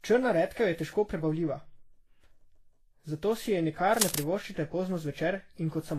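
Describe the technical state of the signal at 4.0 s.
Around 4.0 s there's cable scratch noise from 3.93 to 4.19 s, right after "zato si je" and before "privoščite pozno". It's a fairly loud burst of dense, uneven rustle sitting just under the speech, likely from a worn cable or connector being moved. Underneath that, the whole clip shows transcoding between lossy codecs, likely Vorbis through WMA and back to Vorbis. The stacked artefacts are audible together, with nothing above 14.2 kHz.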